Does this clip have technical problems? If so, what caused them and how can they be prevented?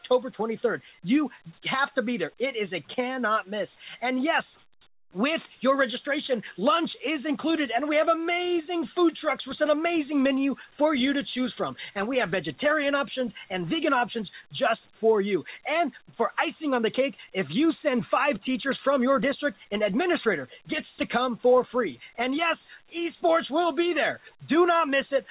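No, nothing here needs fixing; the band stops at 4 kHz, as expected from a narrowband call path consistent with G.711 A-law at 64 kbps.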